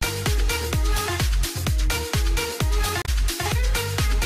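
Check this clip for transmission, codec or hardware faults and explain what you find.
There's one fault. From 3.02 to 3.09 s, damaged data in the compressed stream: the decoder loses sync on corrupted frames and re-locks, leaving a short glitch.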